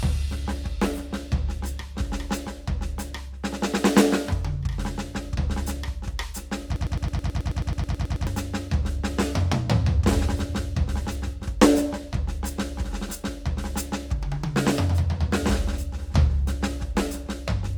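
From 6.76 s to 8.27 s the music falls into a broken-record loop: a fragment about 0.11 s long plays fourteen times back to back, each copy identical, giving a rapid mechanical stutter at roughly nine repeats per second. The likely cause is a player or stream stall that kept resending its last held fragment. Unlike an echo or a stutter, the copies never decay or vary, and the music that should have filled that span is simply missing.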